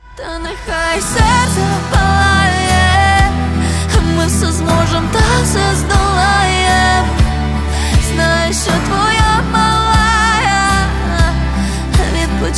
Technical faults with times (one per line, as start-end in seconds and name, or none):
none